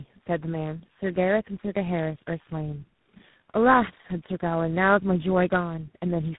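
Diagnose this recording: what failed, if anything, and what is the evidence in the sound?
The codec stage failed through tandem speech coding, audible throughout. The speech is rough, muffled and warbly, with nothing above 3.9 kHz. It sounds coded three times in a row, which fits AMR, then GSM full rate, then G.726. Each coder compounded the previous coder's damage.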